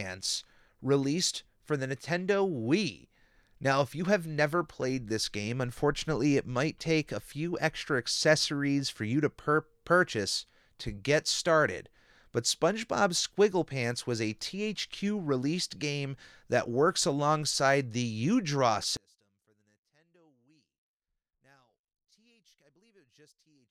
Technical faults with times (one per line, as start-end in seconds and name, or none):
18.97-23.70 one channel inverted